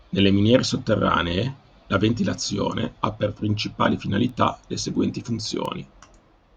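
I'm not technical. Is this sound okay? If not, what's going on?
No. There are two tiny, sharp ticks in this speech: one at about 4.29 s, right after "ventilazione ha per principali", and another at about 5.65 s, just after "le seguenti". Each is a bit error spike, where a single stored digit in the digital audio flipped for an instant. The sound value jumps wildly for a moment and snaps straight back, so you hear a brief click that has nothing to do with the voice.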